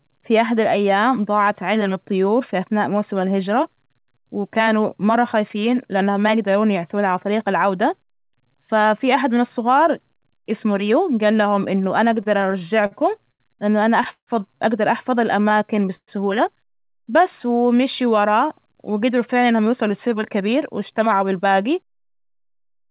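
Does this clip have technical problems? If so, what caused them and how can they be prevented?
Yes. The call path caps everything at 4 kHz, which fits G.711 A-law at 64 kbps, but there are three real problems on top of that.

Repeated stalls (stutter): from 12.06 to 14.29 s there are twelve little hangs, the longest 141 ms. Right after "أقدر أحفظ", between 15.49 and 16.10 s, there are three more, up to 126 ms. Packets arrived late, the jitter buffer kept running dry, and the receiver stretched out the last sound to fill each hole. Nothing gets lost, but it drags. A steadier network path or a bit more buffer headroom would stop it.

Jitter buffer slow-down: from 15.57 to 17.22 s, just before "ومشيو وراه", the audio plays at 97% speed, about 61 ms longer, with the pitch unchanged. The buffer was rebuilding its reserve by repeating pitch periods. Fewer underruns upstream would mean it never needs to stretch.

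Jitter buffer speed-up: from 19.09 to 22.84 s it runs at 106%, trimming roughly a third of a second, so it sounds a little rushed. The buffer held more audio than it aims for, and the receiver cut pitch periods to bring the delay back down. Smoothing the packet bursts on the sending side or in the network would prevent this.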